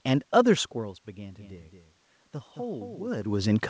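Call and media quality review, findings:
Doubled audio track, 1.39–3.09 s: likely a second capture on a slower path mixed back in. A full-band copy trails by about a fifth of a second, much quieter and dry, starting and stopping abruptly, heard as flat slapback.

Content stops near 8 kHz, which fits a G.722 call path at 64 kbps. Level shifts near 0.5 s and 3.0 s come from the talker moving. Room noise sits underneath throughout.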